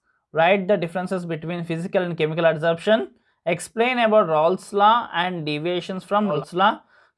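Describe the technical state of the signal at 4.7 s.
At 4.7 s the signal is intact, with no audible technical fault at that point.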